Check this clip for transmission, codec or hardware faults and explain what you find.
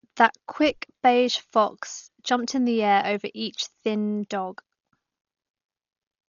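The speech carries one codec fault for its whole length. Dolby Digital compression is the likely cause, heavy throughout: nothing is left above 6.9 kHz, so the speech sounds dull and boxed in. Starved of bits, the encoder narrowed the band and gave many frequency lines no mantissa data at all. The decoder filled those empty lines with dither noise, which shows as a rough, fluttering grain around voiced tones. The damage fits a bitrate near 40 kbps.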